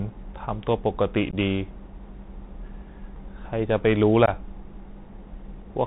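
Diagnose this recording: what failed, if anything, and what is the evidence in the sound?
The codec stage is at fault here: the audio has passed through the Bluetooth CVSD headset codec at 64 kbps. The damage is plainly audible throughout. Nothing reaches above 4 kHz, s sounds turn scratchy, loud bright passages distort as the one-bit delta steps fail to keep up, and a granular hiss sits under the speech. A simple low-pass or a narrowband telephone codec would dull the top end in the same way, but neither would add this slope-overload grit and hiss.

At the network or link stage between headset and phone, there is unconcealed Bluetooth headset packet loss at 1.31 to 1.35 s and again at 4.26 to 4.29 s. Each is a hard-edged hole of about 15 ms, which fits a couple of lost voice packets. Nothing fills the gap, so the speech breaks off abruptly, and the speech resumes briefly quieter as the CVSD step size rebuilds. 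A dropout from a buffer underrun would not show that codec-specific dip in level afterwards.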